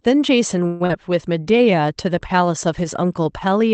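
From 0.67 to 0.91 s the sound smears into a fading buzz for about 220 ms, then resumes with roughly 100 ms lost, likely a long network dropout. From 1.32 to 1.87 s a jitter buffer slow-down stretches the audio by 75 ms, running at 88% speed with unchanged pitch and drawn-out sounds. Throughout, the call codec limits the band to 8 kHz.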